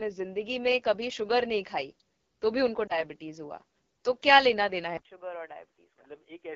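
AMR wideband (HD Voice) codec damage runs through the whole of this speech clip: the raspy, rough texture fits AMR-WB's low 8.85 kbit/s mode, where the pulse-driven vocal tract model codes speech only up to about 6.4 kHz and the top band is filled with shaped noise. A lost AMR speech frame at 2.88 to 3.04 s shows as a short dip or warble, which points to one 20 ms frame failing its checksum, after which the decoder repeated the previous pitch and vocal tract settings at falling gain before good frames resumed. At 4.97 s there is about 80 ms of silence, and then to the end the sound turns dull and boxy with nothing above 3.5 kHz, drops by roughly 10 dB, and gains a faint new noise floor well under the signal, which is likely an input switched to a poorer device, such as another microphone or a headset's call profile.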